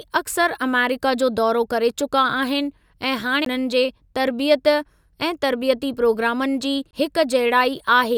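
At 3.45 s, right after "करे चुका आहिनि ऐं", and again from 6.91 to 6.93 s, there's a CD skip: the laser jumps tracks, giving a tiny mute and tick before the speech resumes elsewhere.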